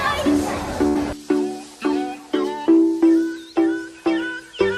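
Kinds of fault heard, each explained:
Burst of packet loss: At 0.87 s the stream drops out for a short run, roughly 80 ms of audio never arriving in time to play. The receiver covers the hole by stretching the last received sound for about 76 ms while fading it down, giving a brief held, dulled tail instead of silence. Playback picks up again at 0.97 s further along, so the stretch between is simply skipped.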